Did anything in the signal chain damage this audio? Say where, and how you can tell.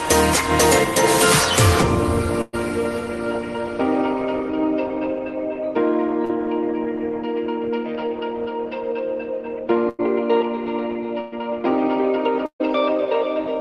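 Yes. The network stage damaged it in four places: 2.41 to 2.55 s, 9.89 to 10.01 s, 11.21 to 11.34 s and 12.46 to 12.62 s. In each, the sound freezes into a held buzz or fading hiss and then jumps ahead. This is a burst of packet loss, with 100 to 140 ms missing each time. The receiver stretched the last received sound across the hole and faded it. At 12.46 s the fill runs out early and leaves a brief dead gap of about 80 ms before the audio resumes.

At 6.25 to 6.31 s there is a short smear or wobble, shorter than the others. This is a short concealed packet loss of about 40 ms, also a network fault. The decoder extrapolated the preceding sound to cover the missing stretch and then cross-faded back into the real signal, so the join is softened rather than clicked. The call codec path itself is audible as its usual coding noise and a top end that stops around 12 kHz, which fits Opus at about 24 kbps.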